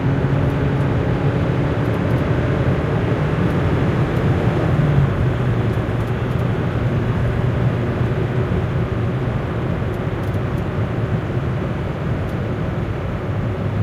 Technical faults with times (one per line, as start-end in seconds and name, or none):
none